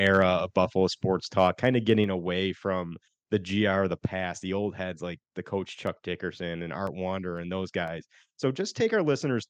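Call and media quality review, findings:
Harsh, crackly edge on loud peaks, 0.06 to 0.23 s and 1.39 to 1.69 s. Likely microphone overload: input gain too high, converter flattening the tops. Overshoot about 2 dB, then about 1 dB. Under 1% of samples clipped.

Sudden level drop at 2.04 s, about 4 dB. Voice and background fall together, shortly after the second distorted peak. Likely microphone volume stepped down by the call software's input gain control, reacting to the clipping.

Regular ticks, 5.87 to 8.37 s, every 0.5 s, about seven in total. Periodic USB or driver dropouts: a background task stalls the bus or audio driver at a fixed interval. Each gap is roughly 1 ms, filled with silence, and audible only over signal.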